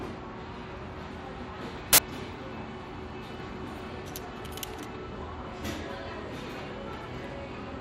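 File tags played as audio appear from 1.93 to 1.98 s: an embedded cover picture, stored as compressed data, was decoded as if it were samples. Its near-random bytes produce a hard-edged, 53 ms burst of very loud white noise cutting abruptly across the sound.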